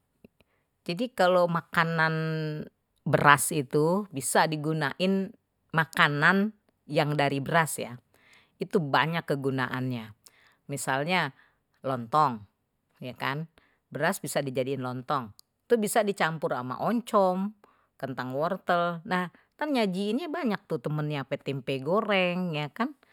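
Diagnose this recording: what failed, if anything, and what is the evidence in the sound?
Nothing stood out on listening to this speech recording that would point to a failure at any stage.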